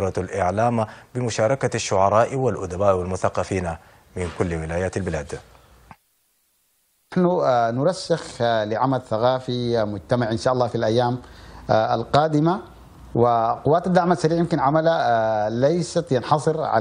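No technical faults are audible anywhere in the recording.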